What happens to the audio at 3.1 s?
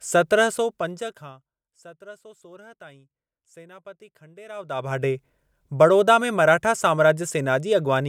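Nothing goes wrong at 3.1 s: the speech carries on intact through that moment, with no fault to be heard there.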